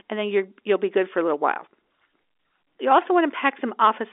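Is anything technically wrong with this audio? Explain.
No, nothing is wrong: the speech sits in an ordinary G.711 telephone band of roughly 300 Hz to 3.6 kHz with nothing above 3.8 kHz, exactly as a normal phone line delivers it.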